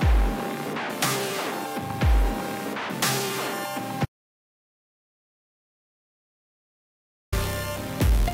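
An audio dropout to silence runs from 4.05 s to 7.32 s, cutting the sound off mid-flow and bringing it back just as abruptly about 3.27 s later. The gap is silent, with no room tone or background hiss underneath, so nothing from that stretch survives. That points to the input signal disappearing while the recording chain kept writing empty samples, most likely from a momentarily disconnected device, a broken link or an accidental mute.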